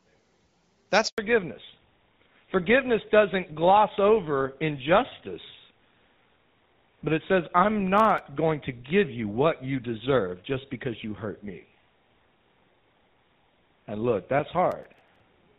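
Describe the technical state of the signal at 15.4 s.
At 15.4 s the speech is still in a fallback to narrowband, which begins at about 1.18 s and runs to the end of the clip. The call has dropped from the lightly coded HD Voice band, which fits AMR-WB at 12.65 kbit/s, to an older narrowband codec such as GSM full rate, so nothing above 4 kHz survives. The voice sounds duller and rougher. On a spectrogram the energy stops at a flat 4 kHz ceiling.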